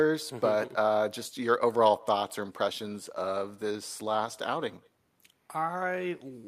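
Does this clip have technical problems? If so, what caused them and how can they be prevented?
Yes. Throughout the speech there is echo with no canceller: a far-end loudspeaker feeds its microphone, returning the voice about 28 dB down roughly a fifth of a second later, a distinct thin copy rather than reverberation's smooth tail. Far-end echo cancellation or headphones prevent it.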